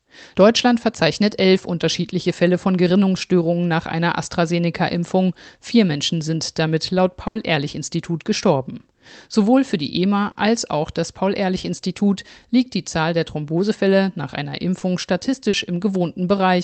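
Burst of packet loss, 7.27 to 7.37 s: a run of the call's audio never arrived in time to be played. The receiver stretched the last sound it had across the gap for about 80 ms, fading it as it went, so the speech briefly turns into a held, dying sound. When audio returns, roughly 80 ms of the original speech has been skipped, leaving a jump in the flow.

Short concealed packet loss, at 10.31 to 10.37 s, 14.79 to 14.83 s and 15.49 to 15.55 s: smaller holes, about 40 ms, 20 ms and 40 ms, where the decoder had nothing to play. It invented a continuation from the preceding sound, following its pitch where voiced and using shaped noise otherwise, then crossfaded into the real signal. Each is heard as a quick smear or wobble, with that stretch of genuine speech lost. Through the call path, the band tops out near 8 kHz.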